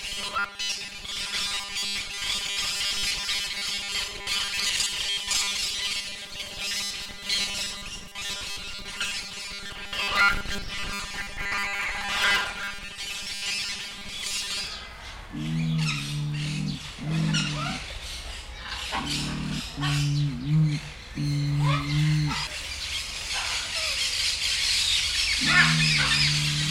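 Robotic sound from repeated short buffers runs from 0.01 to 14.67 s: a rigid 200 Hz metallic buzz, likely from 5 ms chunks repeated most of the time while fresh audio is skipped.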